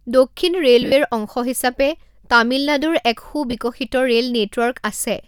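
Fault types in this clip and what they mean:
lost LE Audio frames: at 0.82–0.92 s and 3.51–3.53 s; 70 ms is lost across 100 ms, longest gap about 50 ms, and 20 ms later, fitting 10 ms frames. The LC3 decoder fills gaps by repeating the last spectrum with random signs, smearing speech into noise.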